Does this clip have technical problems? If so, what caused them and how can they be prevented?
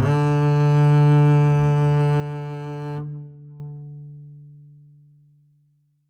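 Yes. From 2.2 s to 3.6 s the music drops by about 11 dB and then comes back: a sudden gain jump. The likely cause is a digital gain change applied from one sample to the next with no ramp. On a waveform the envelope shows an abrupt rectangular step down and back up. On a spectrogram every frequency band dims at once, with the background falling together with the music. To prevent it, ramp every gain change smoothly over a few milliseconds instead of switching it instantly.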